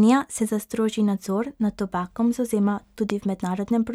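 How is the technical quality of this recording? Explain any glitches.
The recording has one audible glitch. Loud pop at 3.1 s: a single sharp pop, well above the speech level, with the speech continuing underneath. It's likely a sudden voltage pulse from a plug, switch, static or driver glitch.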